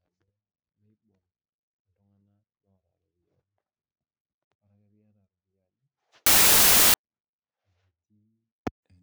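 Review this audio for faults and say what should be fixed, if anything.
From 6.26 to 6.94 s the speech turns into loud, harsh noise, with the real signal faintly buried underneath at half speed and an octave low. This is a wrong sample width fault. Audio written as 32-bit integers was read as 16-bit, so each sample split into two values: one keeps the top bits of the signal, and the other, built from low-order bytes, sounds like noise. A byte-order swap would also add noise but would keep speed and pitch. Carrying the sample format explicitly with the data and checking it at every read would prevent it.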